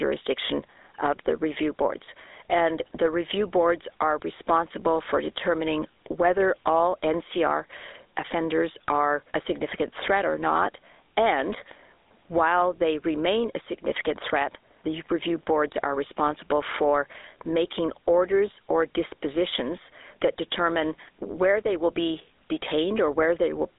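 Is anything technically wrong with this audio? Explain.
Yes. Two faults run through the whole speech clip.

The first is gain pumping, with a likely cause of input gain set far too high and a fast limiter or compressor clamping down whenever the level peaks. The gain swings by roughly 10 dB. Loud and quiet passages sit close together in level, so the speech sounds squashed.

The second is the GSM full-rate codec, at a rate consistent with 13 kbps on a telephone line. It models the vocal tract and excites it with regularly spaced pulses, discarding most of the excitation detail, and passes roughly 300 Hz to 3.7 kHz, with nothing above 3.8 kHz. The damage is plainly audible: a buzzy, gravelly roughness on voiced sounds and a dull, narrow telephone tone.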